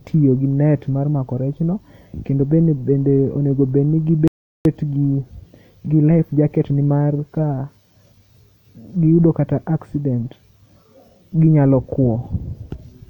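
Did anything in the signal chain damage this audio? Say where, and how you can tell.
Yes. The speech stops dead at 4.28 s and goes silent until 4.65 s, then carries on from exactly the point where it broke off, with nothing skipped or repeated. That is a rebuffering stall at the playback stage, downstream of any network delivery. The player drained its buffer of downloaded audio, halted output until more data arrived, and then resumed. No material is lost, but the gap adds about 376 ms to the running time.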